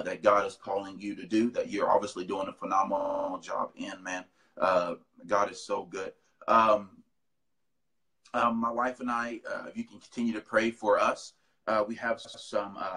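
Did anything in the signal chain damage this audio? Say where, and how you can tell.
Yes. The damage occurred at the codec or storage stage, where repeated frames were written into the stream. From 3.00 to 3.28 s, a 46.4 ms block plays six extra times, adding 278.6 ms and producing a rapid stutter. From 12.24 to 12.43 s, a 92.9 ms block repeats twice more, adding 185.8 ms. These lengths fit small runs of compressed frames that the decoder replays, so the audio gets longer.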